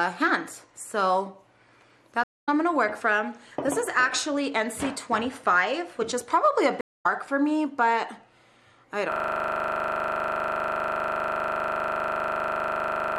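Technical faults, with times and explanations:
2.24 to 2.49 s and 6.81 to 7.06 s, stream reconnect: Twice the connection dropped, the player stalled, reconnected and started a fresh decoder partway through the stream. Each time there is about 0.24 s of silence. The sound then picks up about 0.2 s later at the first gap and about 0.3 s later at the second, so a short stretch of the material is skipped instead of paused, and the restart fades in.
9.12 s to the end, system hang loop: The machine or its audio driver froze while the sound hardware kept replaying the same stretch of its ring buffer. A single 40 ms slice of audio repeats exactly, about a hundred times, at 25 Hz. Because the slice is so short, the result is a steady, rough buzz pitched at that rate rather than recognisable sound. It never recovers and runs on to the end of the clip.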